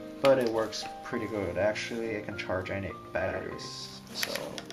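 At 3.05 s a doubled audio track cuts in abruptly and runs to the end: a second full-band copy of the sound trails the original by roughly 150 ms, somewhat quieter, around 5 dB down. It is likely a second capture through a slower path, or an edit leaving two copies out of step. Unlike an echo or room reverb, the copy carries no decay tail or room colouring, just one identical delayed repeat.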